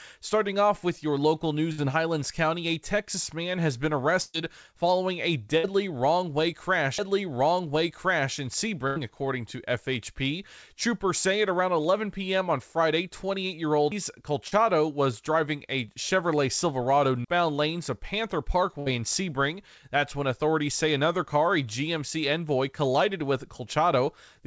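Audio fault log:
1.72–1.80, 4.22–4.36, 5.58–5.65, 8.87–8.98 and 18.80–18.88 s burst of packet loss: 60 to 120 ms went missing each time, after "man has been" and "following a". The last sound is stretched and fades, then speech resumes further on.
6.98 s and 17.25–17.28 s CD skip: a tick as playback mutes, very briefly and then for about 40 ms. Speech then continues from a different place on the disc.
14.48–14.54 s short concealed packet loss: about 40 ms never arrived in time, just before "was driving a". The gap is filled by continuing the last sound, giving a brief smear.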